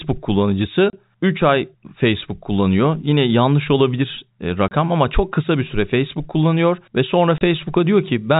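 Single packets of speech went missing at 0.90, 4.68 and 7.38 s, and the receiver played silence in their place: packet loss filled with silence. Each 30 ms gap, consistent with one lost packet, cuts the narrowband G.711 telephone sound abruptly, with hard edges.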